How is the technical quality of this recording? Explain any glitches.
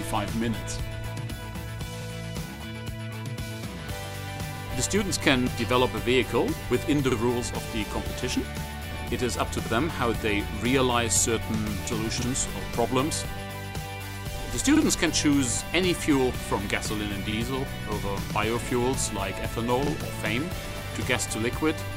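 Technical quality suffers from a regular stutter. At 2.02, 4.57, 7.12, 9.67, 12.22, 14.77, 17.32 and 19.87 s, a 50 ms slice of sound plays twice, heard as a brief click and hiccup. These are overlapping chunks. The audio was handled in 2.5 s blocks, and each block began 50 ms before the previous one ended, so every join repeats that sliver. This explains the steady spacing of about 2.55 s.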